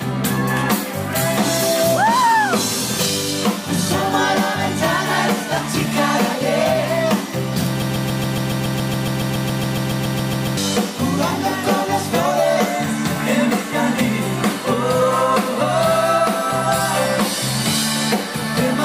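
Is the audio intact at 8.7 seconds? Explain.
No. A likely player or stream stall resends one 140 ms fragment 20 times: a broken-record loop from 7.82 to 10.57 s, losing the intended audio.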